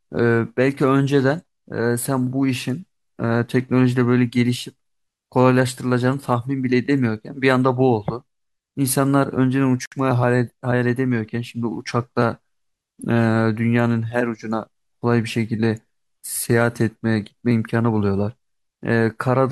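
At 9.86 s, a gap at a join of encoded pieces cuts a 62 ms silence into the speech. Its edges are smeared, and the sound resumes where it stopped. Separately encoded 10 s pieces were joined without trimming the encoder delay and end padding.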